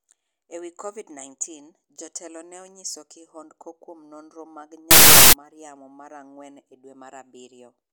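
From 4.91 to 5.33 s, right after "kihondko kuom nonro mag", the speech gives way to loud, harsh broadband noise until "mar yamo mar ang'wen". These are samples built from the wrong bytes: misordered or misaligned bytes push the rapidly changing low bits into each value's high part.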